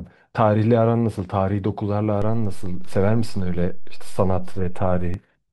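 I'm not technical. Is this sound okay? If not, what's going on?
No. At 2.22 seconds there's a low thump, and another at 5.14 seconds. This is a DC step: the waveform's resting level suddenly shifts, then shifts back, while the speech continues.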